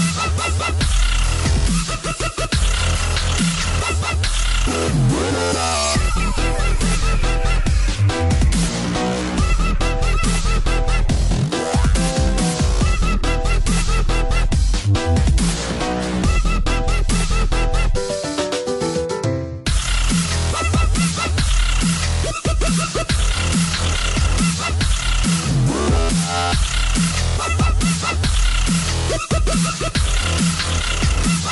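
From start to end the sound is watery and swirly. Attacks smear, and sibilant or bright sounds chirp metallically. This is likely MP3 compression at a low bitrate, fitting roughly 48 kbps, with weak frequency lines flickering between frames.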